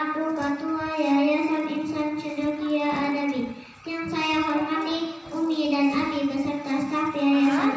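From 1.5 s to 5.76 s the resampler restarted on every block. Each 20 ms block, in what points to a 24 kHz to 16 kHz conversion, lacked its neighbours' samples at the edges, giving a 50 Hz buzz. A spectrogram shows vertical stripes every 20 ms.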